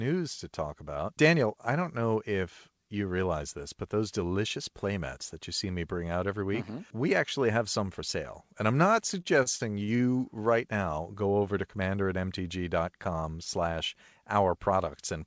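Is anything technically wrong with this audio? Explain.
Yes. From 9.22 to 10.01 s, between "I'm not" and "right now go over", the speech suffers repeated stalls (stutter). Packets arrived late, so the jitter buffer kept running dry and the receiver stretched the last sound across five short gaps, the longest 48 ms and 175 ms in all, about a fifth of that stretch. It drags and hiccups. On a spectrogram, brief smeared, repeated slices interrupt the formant movement, below the flat 8 kHz ceiling left by the G.722 call codec.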